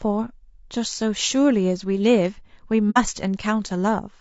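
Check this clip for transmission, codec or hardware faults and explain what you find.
Two faults are present: codec degradation across the whole clip and one short dropout.

Throughout the speech, the sound is plainly rough and grainy, with noise filling the gaps between pitch harmonics and a thin, synthetic top band. The likely cause is low-delay AAC compression (AAC-ELD). Its short frames resolve harmonics poorly, and the damage fits a bitrate around 32 kbps.

From 2.90 to 2.98 s there is AAC frame loss with muting. The decoder zeroed the spectrum of the missing frames, about 60 ms of audio, which fits two lost frames. Overlapping windows fade the sound out and back in, leaving a soft-edged hole.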